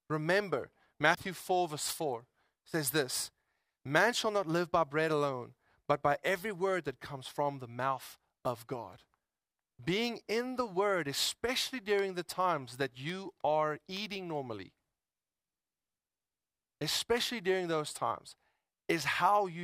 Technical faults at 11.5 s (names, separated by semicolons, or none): none